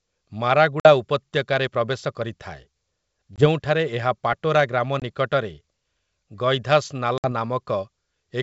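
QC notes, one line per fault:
0.80–0.89 s, 3.36–3.47 s, 5.00–5.03 s, 7.18–7.26 s: packet loss on an ADPCM call. Abrupt silent holes cover 50, 20, 20 and 60 ms of lost audio. The first falls just before "ଉପତ୍ୟକାରେ ପ୍ରବେଶ କରିଥାଏ". The decoder's predictor and step size then mismatch the sender's, so speech resumes slightly distorted, settling within tens of milliseconds. On a spectrogram these show as full-band vertical gaps.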